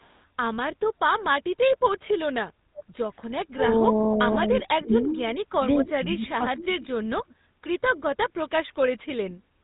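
GSM full-rate codec throughout: the speech passes through a coder that models the vocal tract and drives it with a sparse pulse excitation, which fits a 13 kbps GSM full-rate stream. The damage is plainly audible as a buzzy, gravelly roughness, and nothing above 3.8 kHz survives, so the voice sounds narrow.

Echo leak from 0.0 to 0.24 s: a very faint delayed copy of speech, roughly 35 dB below the voice and arriving about half a second (497 ms) late, briefly appears. It is likely loudspeaker sound that a far-end echo canceller failed to fully remove and sent back down the line.

Background gated by the echo canceller from 2.53 to 2.98 s: for about half a second the room sound dips by about 17 dB and then returns. An echo canceller clamped the microphone hard while its loudspeaker was playing, pulling the background down with it.

Speech suppressed in double talk from 4.74 to 6.74 s: across roughly 1.5 seconds within this span, the talker's voice dips by around 25 dB at its deepest. 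The likely cause is both sides talking at once, so the echo canceller could not separate the talker from the loudspeaker echo and turned both down.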